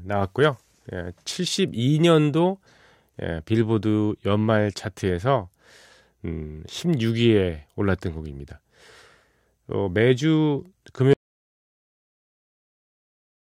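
At 11.1 s the input feeding the recorder was likely cut off, through a dropped connection or a mute, while the recording itself kept running and wrote silence. The result is an audio dropout to silence: the speech stops abruptly mid-flow and never returns, leaving about 2.4 s of dead digital silence through to the end, with not even room tone underneath. Whatever followed in the speech is lost.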